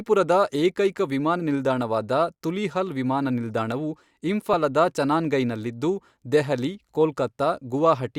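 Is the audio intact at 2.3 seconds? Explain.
Yes, the audio is intact at 2.3 seconds, with no dropout, click, distortion or other fault audible at that moment.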